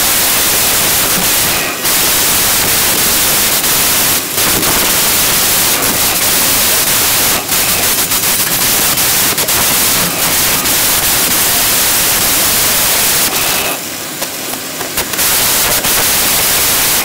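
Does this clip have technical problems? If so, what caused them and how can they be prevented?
Yes. A wrong sample width runs through the whole clip: audio stored as 16-bit integers is being read as packed 24-bit, so each value is stitched from bytes of neighbouring samples, and only some keep the true top bits. The result is loud, harsh noise with the real sound buried underneath, playing 1.5 times too fast and correspondingly higher. That speed and pitch shift separates it from a byte-order swap, which stays at normal speed. Declaring the sample format explicitly in the file header and checking it on import prevents this.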